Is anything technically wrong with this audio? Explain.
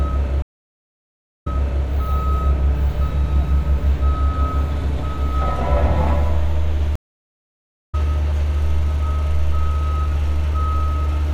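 Yes, there are two stream reconnects. At 0.42–1.84 s, the sound drops out for about 1.04 s, then a fresh decoder resumes 0.38 s earlier and replays material. At 6.96–7.95 s, a 0.98 s silence is followed by a jump about 0.7 s later.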